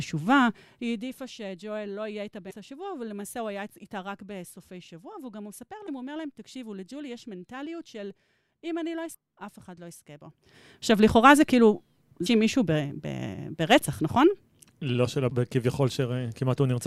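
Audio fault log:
0.44–1.41 s: zipper noise. The speech drops by roughly 15 dB, and instead of sliding down smoothly the gain moves in small discrete jumps, about a hundred per second. Each jump changes the level abruptly mid-waveform, and each discontinuity leaves a tiny click. At that rate the clicks fuse into a fine ticking or zipping texture over the speech for as long as the level is moving. It stops once the gain settles.
2.49–2.52 s, 5.85–5.89 s, 9.11–9.15 s, 12.25 s, 15.28–15.32 s: damaged data in a compressed stream. Five short blips, each lasting about 40 ms or less, appear at roughly three-second intervals. At each one, part of the coded stream is corrupt. The decoder either misreads those frames or throws them away, loses its place, and hunts forward for the next valid frame header. The result is a brief chirp, squawk, click or short hole in the speech.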